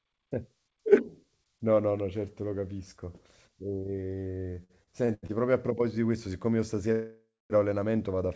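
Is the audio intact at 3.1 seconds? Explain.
Yes, the speech at 3.1 seconds is intact, with no dropout, glitch or distortion, only the normal band limit of a G.722 call path, which leaves nothing above 8 kHz.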